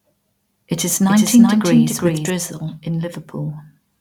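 From 1.08 s to 2.30 s the speech is joined by a doubled audio track: a second full-band copy trailing by roughly 0.4 s, several dB quieter, dry, switching on and off abruptly, likely from a duplicated capture path.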